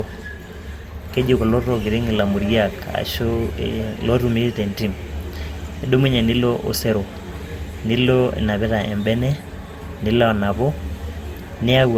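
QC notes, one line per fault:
Throughout, generation loss: the speech has a swirly, smeared, hollow quality beyond what a single lossy pass would leave, with consonant attacks blurred, though content still extends to about 20.2 kHz. The character points to an Opus chain around 64 kbit/s, likely re-encoded about four times, each pass requantising on a shifted frame grid so noise accumulates rather than cancels.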